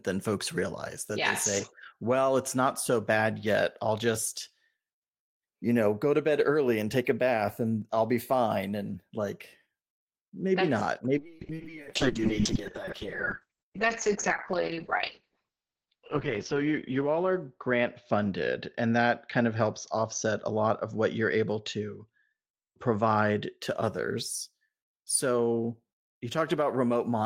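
From 11.19 to 23.65 s, just after "maybe that's not", a call bitrate drop turns the speech muffled and watery. The coarser coding fits a fall from 40 to 7 kbps, and the bandwidth narrows from 20 kHz to 8 kHz. Unlike packet loss, nothing drops out. The damage is continuous.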